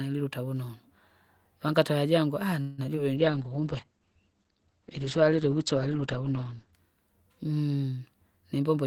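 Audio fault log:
2.61–2.80 s, call audio freeze: Right after "vangata jangu aaha" the sound stalls for about 166 ms and then resumes where it stopped, with nothing lost, most likely because packets were held up and the jitter buffer ran dry. On a spectrogram the last sound stretches into a fading smear.
2.86–2.89 s and 2.95–2.98 s, short concealed packet loss: Two brief holes follow the freeze, each a few hundredths of a second where audio never reached the decoder in time. The receiver extended the preceding sound and blended back, leaving quick smears. On a waveform they show as short, slightly irregular patches.
3.18–6.81 s, call bitrate drop: The encoder fell from 32 to 10 kbps, staying at the bottom for about 3.5 s, and its bandwidth shrank from 20 kHz to 8 kHz. The audio turns muffled and rough. A spectrogram shows everything above 8 kHz sharply cut away.
3.30–3.61 s, jitter buffer slow-down: Here the audio plays at about 86% speed with pitch unchanged, adding roughly 50 ms as the receiver repeated single pitch periods to build a reserve. 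Sounds drag, and on a spectrogram harmonic stretches look elongated without shifting in frequency.
8.57–8.84 s, jitter buffer speed-up: Near the end, playback runs at about 128% speed, pitch intact, as the receiver trimmed short pitch-period pieces totalling about a tenth of a second to cut excess delay. The sound feels hurried, and the waveform shows compressed, tightly packed cycles.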